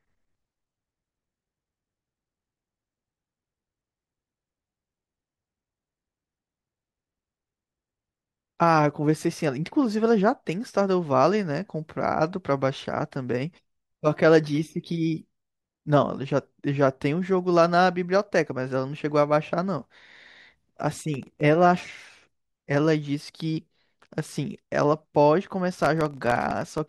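Processor overload crackle hits this speech clip from 21.14 to 21.41 s and again from 25.76 to 26.78 s, near the end. The processor falls behind and misses a run of buffer deadlines. Each missed buffer drops out to silence with hard edges, and these tiny gaps, each under a millisecond long, which points to very small buffers, merge into gritty tearing over the sound. The second burst is longer, with more missed buffers.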